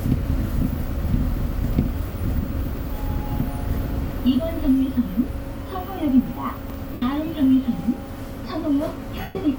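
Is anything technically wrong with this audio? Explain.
Yes, two kinds of fault are audible.

Chunks out of order at 2.60–2.77 s and 6.57–6.74 s: a 43 ms block plays three chunks late, so the sound jumbles. The waveform shows three abrupt discontinuities, and the spectrogram shows vertical broadband lines at each join.

Lost LE Audio frames at 6.93–7.02 s (90 ms) and 9.21–9.35 s (about 140 ms): the LC3 decoder repeats the last spectrum with random signs and fades it, so tones smear into noise. On the spectrogram, harmonics blur into a hazy band that thins toward silence.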